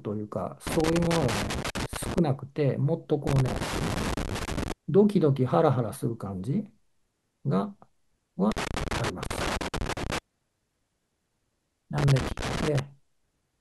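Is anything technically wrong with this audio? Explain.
Yes. A worn or dirty contact somewhere in the signal chain is making and breaking as it shifts, producing loose connector crackle in four bursts: 0.67 to 2.18 s, 3.27 to 4.72 s, 8.52 to 10.18 s and 11.98 to 12.79 s. Each time the connection flickers, the speech signal is chopped into fragments, and any DC on the line lands as pops. The result is an irregular, scratchy crackle laid over the speech during those spans.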